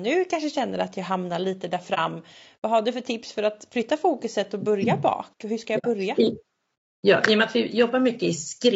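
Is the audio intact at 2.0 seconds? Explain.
No. The sound is not intact at 2.0 seconds. An AAC frame loss with muting produces a short hole from 1.94 to 1.99 s, right after "jag hamnar lite där". The decoder zeroed the spectrum of the missing frame, and the overlapping windows fade the sound down and back up. The gap is consistent with about 30 ms of audio from a single lost frame. Unlike a hard dropout or sample-level cut, its edges are soft, so it reads as a brief smooth dip rather than a snap.

At 2.0 s the sound is also still carrying the damage that runs through the whole clip. The speech is rough and grainy, with noise filling the spaces between the pitch harmonics and a thin, somewhat synthetic top band. This points to low-delay AAC compression, likely AAC-ELD at a rate around 32 kbps. Its short frames resolve the harmonics poorly and leave too few bits for detail. This damage is steady rather than momentary, which separates it from the dropout just before.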